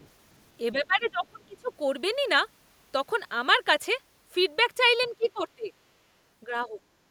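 Speech, with two echo-related faults. The other side's voice leaking through appears as faint scraps at 0.0–0.09 s, 0.33–0.37 s and 5.01–5.11 s, likely loudspeaker echo the canceller missed, showing as weak extra spectrogram energy well below the talker. Speech suppressed in double talk hits 0.72–1.71 s, 5.1–5.71 s and 6.45–6.79 s, with waveform dips of around 20, 20 and 10 dB, likely from the canceller ducking during overlap.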